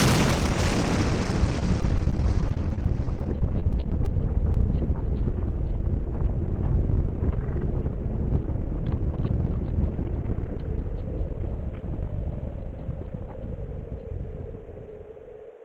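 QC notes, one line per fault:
1.59–4.07 s, repeated packet loss (robotic sound): across this stretch about two dozen holes open in quick succession, none longer than 20 ms, adding up to roughly a quarter of a second of missing audio, around 11% of the span. Each hole is bridged by extending the sound just before it, and the next arrives before the audio settles, giving a choppy texture. Unlike a single concealed loss, the damage is a sustained rhythm of patches rather than one isolated blemish.
4.54 s, short concealed packet loss: about 10 ms of audio goes missing once and is covered by carrying the preceding sound forward, then crossfading back into the real signal. It comes across as a brief smear or wobble, and a very short transient at that point can disappear. What separates it from the earlier run is that it stands alone. It also differs from a plain dropout because the hole is filled rather than left silent.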